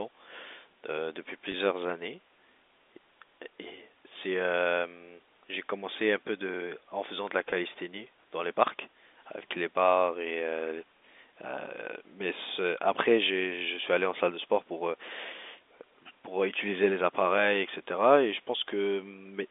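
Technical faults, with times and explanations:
1.52–1.54 s and 7.50–7.52 s, packet loss with pitch repetition: a brief held, slightly buzzy blip in the telephone-band speech, where about 20 ms went missing, which fits a single dropped packet, and the receiver filled it by repeating the last pitch period before resuming.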